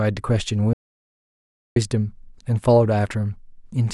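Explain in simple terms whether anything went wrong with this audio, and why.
Something went wrong. At 0.73 seconds the speech cuts out completely and only returns at 1.76 seconds. This is an audio dropout to silence. For about one second there is total silence, with no background hum at all. The likely cause is that the input was briefly lost while recording continued. Whatever was said in that gap is gone.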